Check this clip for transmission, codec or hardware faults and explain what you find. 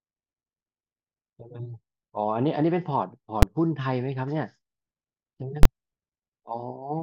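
Two invalid numbers at full scale faults occur. At 3.42 s a short block sits flat at one extreme value, heard as a single bang, which fits a 256-sample block. From 5.63 to 5.65 s a longer block, likely 1024 samples, gives a loud pop at each edge with silence between. In both cases a calculation produced infinite or invalid values, and these were pinned to the maximum level. Unlike ordinary clipping, nothing of the speech survives through these blocks.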